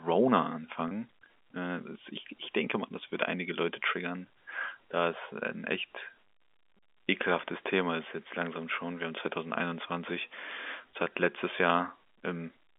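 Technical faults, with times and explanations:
0.88–0.91 s, packet loss with pitch repetition: a brief held, buzzy sound where about 30 ms of audio went missing, which fits three 10 ms packets, and the receiver repeated the last pitch period to fill the gap.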